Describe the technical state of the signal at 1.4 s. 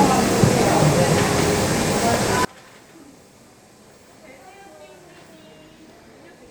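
At 1.4 s the audio is intact, with no dropout, distortion or other fault to be heard at that moment.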